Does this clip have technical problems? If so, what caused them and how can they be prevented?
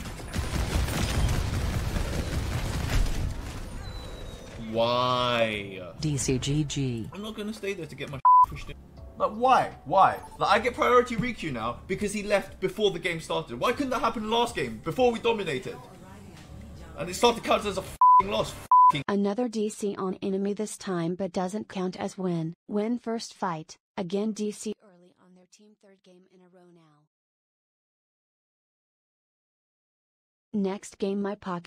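Yes. From about 24.73 to 27.20 s the sound suddenly drops by about 26 dB, leaving a faint residue before full level comes back. That's most likely one channel inverted: with one side's polarity flipped, everything common to left and right cancels when the two are summed to mono, so only their small differences survive. Prevent it by checking polarity on every cable, plugin and channel strip, and by monitoring in mono before export.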